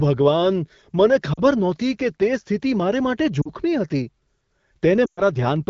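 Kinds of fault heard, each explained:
lost AMR speech frames: brief 40 ms dips at 1.33 and 3.41 s and a 120 ms fade at 5.05 s, as the decoder repeats its last speech settings at falling gain.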